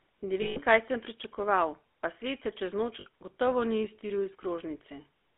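From the start, the whole clip carries the GSM full-rate codec sound. The speech has a buzzy, gravelly roughness, plainly audible, because the vocal tract is modelled and then excited by a sparse, regularly spaced pulse train instead of the real waveform. The band runs only from about 300 Hz to 3.5 kHz. The grit is what separates it from a simple telephone band-limit, which would be dull but smooth. It fits 13 kbps full-rate GSM.

Two spots of lost GSM frames sit on top of this, at 0.42 to 0.59 s, about 140 ms, and at 3.00 to 3.07 s, about 60 ms. In each gap the decoder kept repeating the last good frame, so the sound freezes into a metallic, ringing hold rather than dropping straight to silence or clicking as a plain dropout would. The short second one is a brief smeared ring.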